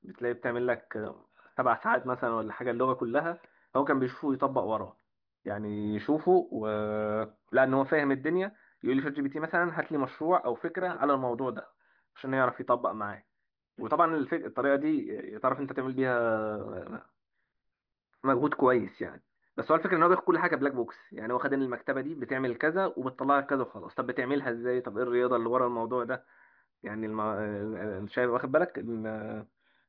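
No technical fault can be heard anywhere in this speech recording. There is nothing to place on a timeline and no event to describe.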